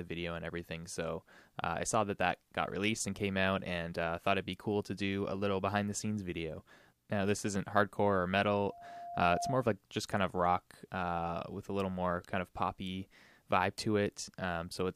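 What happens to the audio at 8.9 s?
At 8.9 s a loudspeaker feedback squeal is building: from 8.66 to 9.69 s a 695 Hz loop tone swells over roughly 0.7 s, reaching about the programme level.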